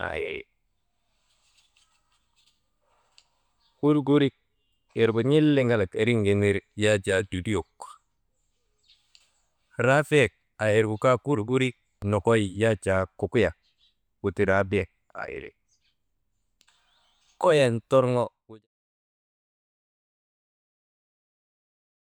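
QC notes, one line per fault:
Nothing stood out on listening, and the speech eases out in a smooth fade that finishes at about 18.7 s.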